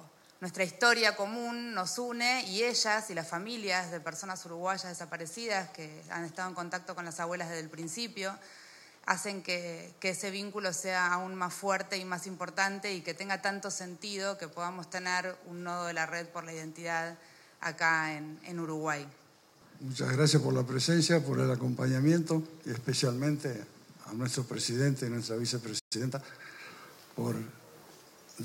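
At 25.79 s the sound stops dead in mid-flow. Silence holds until 25.93 s, a gap of roughly 120 ms. This is a playback stall. The output simply goes quiet. The likely cause is that the player ran short of buffered data, or its output thread was blocked for a moment.

From 25.93 s to 26.17 s comes time-compressed catch-up. The player works off the backlog left by the stall. It trims small slices from the audio and cross-fades the joins. The result runs at about 1.5 times normal speed. Pitch stays where it was, so the passage sounds hurried, not raised. Normal pace resumes after 26.17 s.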